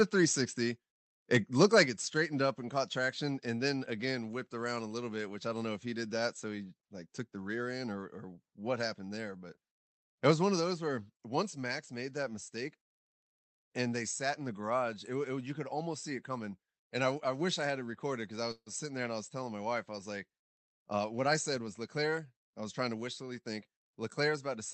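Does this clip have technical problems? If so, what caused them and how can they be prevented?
Yes. From 1.34 to 1.82 s the loudest syllables crackle harshly, likely microphone overload: peaks run about 5 dB past the converter's limit, flattening a couple of percent of samples. Unlike codec roughness, the distortion follows only the peaks. Set input gain lower so peaks stay below full scale.

At 1.86 s voice and background drop together by about 4 dB in one step, likely the microphone volume stepped down by the call software. It is an abrupt step, not a gradual fade. Fixing the input gain beforehand prevents this automatic correction.

From 18.51 to 18.69 s the sound stretches into a fading buzz, then about 50 ms of silence, likely a call audio freeze: delayed packets emptied the jitter buffer. Unlike a dropout, nothing is missing; about 150 ms is inserted. A steadier network path prevents it.

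From 20.56 to 22.26 s the speech runs about 8% fast at unchanged pitch, a jitter buffer speed-up trimming roughly 150 ms of backlog. The pitch does not rise, so this is not a resampling error. Reducing network jitter avoids the backlog.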